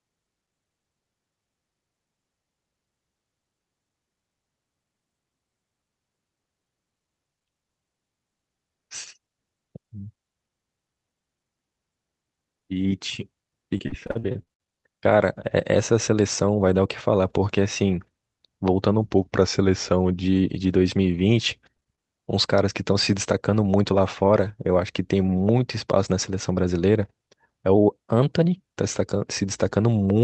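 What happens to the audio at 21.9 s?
Repeated packet loss (robotic sound) runs from about 21.76 to 21.99 s, so 21.9 s falls inside it. Over that quarter-second the speech stream drops out four times, each gap at most 20 ms, and the receiver patches each hole by extending the last sound it had, leaving about 30% of the stretch synthetic. The speech turns choppy, with small pieces missing, heard against the call codec's 8 kHz top end.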